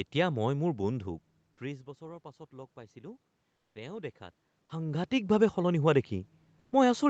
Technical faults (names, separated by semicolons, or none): comfort noise in place of the background